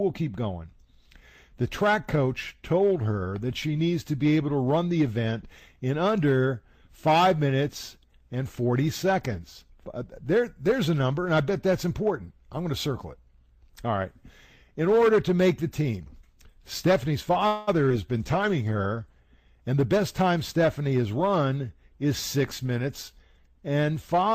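A call audio freeze shows up as a fading buzz from 17.47 to 17.69 s, after which the audio resumes where it stopped, likely because delayed packets drained the jitter buffer and about 0.2 s of filler was inserted. At 17.89 to 17.92 s, short concealed packet loss leaves a brief smear: roughly 40 ms failed to arrive in time, and the receiver briefly extended the preceding sound before blending back. From 18.20 to 19.28 s, a call bitrate drop from 32 to 14 kbps makes the sound rougher and duller, as the encoder codes coarsely and trims high frequencies.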